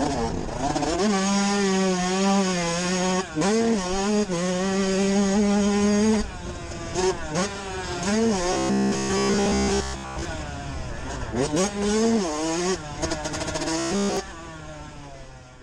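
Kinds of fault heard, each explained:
Robotic sound from repeated short buffers: Fresh audio likely stopped reaching the output in time, so the software kept replaying its last 15 ms chunk instead of the skipped material. That loop imposes a steady 66.7 Hz buzz, turning the sound into a rigid, metallic drone that only loosely tracks the original. It runs from 8.53 to 10.25 s, where most of the stretch is repeated, and again from 13.79 to 14.17 s, where it is repeated throughout.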